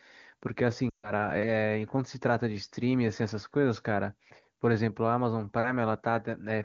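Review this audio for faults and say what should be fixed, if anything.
Lost AMR speech frames from 0.89 to 1.12 s: about 140 ms fails, roughly seven 20 ms frames. The decoder stretches the last good pitch and vocal tract settings, fading out. Better radio error protection or a stronger link would prevent it.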